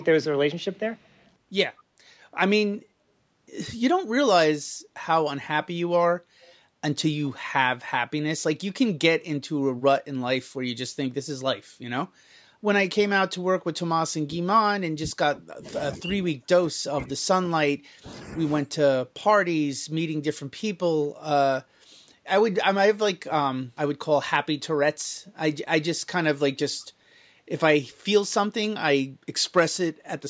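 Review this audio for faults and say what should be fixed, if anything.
Echo leak at 0.00–0.05, 0.73–1.29, 6.41–6.54 and 25.26–25.30 s: a faint copy of the speech returns about 177 ms late, roughly 30 to 40 dB down. It is likely that a far-end loudspeaker's echo canceller let residual pickup through.

Speech suppressed in double talk at 13.76–15.74, 15.92–18.11 and 18.63–18.79 s: the talker's level sinks by as much as about 30 dB in patches. This is likely the echo canceller mistaking overlapping talk for echo and turning both down.

To prevent both, tune the echo canceller's adaptation and double-talk detection, or use a headset so the loudspeaker signal never reaches the microphone.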